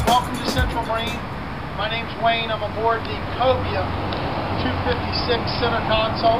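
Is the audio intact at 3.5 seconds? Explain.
Yes, the audio is intact at 3.5 seconds, with no dropout, click, distortion or other fault at that point.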